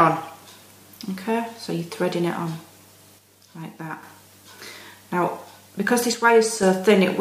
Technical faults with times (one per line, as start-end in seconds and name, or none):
3.18-4.03 one channel drops out
6.14-6.63 one channel drops out